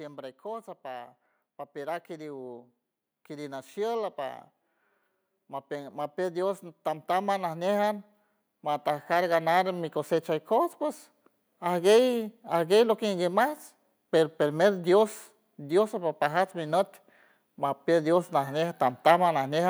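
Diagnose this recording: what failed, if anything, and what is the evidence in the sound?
Automatic gain rising in the call-processing stage. From 5.34 s to 11.76 s the level climbs steadily by about 10 dB, and the background noise swells along with the speech, which rules out the talker simply getting louder. The gain control judged the input too quiet and kept raising its gain over those six seconds. On a waveform the envelope widens gradually across that span; on a spectrogram the noise floor brightens uniformly at all frequencies.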